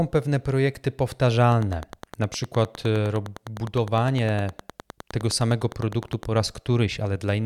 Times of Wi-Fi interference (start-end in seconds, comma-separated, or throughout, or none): 1.48-6.25